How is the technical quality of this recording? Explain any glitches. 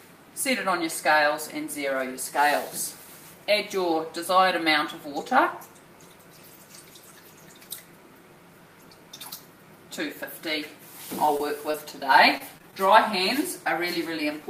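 The recording has two kinds of network glitch, both clustered near the end.

At 11.25–11.29 s, 11.37–11.41 s and 11.71–11.76 s, brief smears or wobbles come from short concealed packet loss. About 20 ms went missing each time, and the receiver papered over it by extending the preceding sound.

From 12.38 to 12.74 s the sound turns choppy. This is repeated packet loss: four quick dropouts, the longest 22 ms, each patched before the next arrived.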